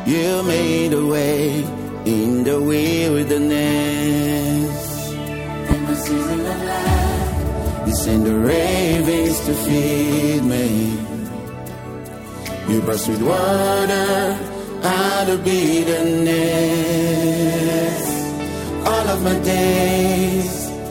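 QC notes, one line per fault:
5.71–5.75 s: loud pop. A single sharp pop, roughly 15 dB above the sound, which carries on underneath. A sudden voltage pulse, likely from a plug, switch or static discharge, hit the signal and was shaped by the following circuits.
8.93–9.09 s: loud pop. Two pops in quick succession, about 10 dB above the sound. This is likely a similar pulse, or a pair of them, added on top of the audio rather than replacing it.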